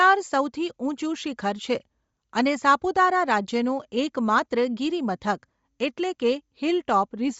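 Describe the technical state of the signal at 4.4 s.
At 4.4 s you're hearing the same thing that runs through the whole clip: the speech has a breathy, grainy edge and nothing above 7.7 kHz. That's likely Bluetooth LC3 compression, a transform codec that discards upper-band detail and fills it with noise. It fits roughly 32 kbps in 10 ms frames.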